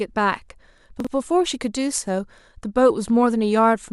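At 1.00 to 1.07 s there are chunks out of order. One block of about 21.3 ms arrives two blocks late and plays after audio that should follow it. The speech briefly sounds jumbled. There are three hard joins.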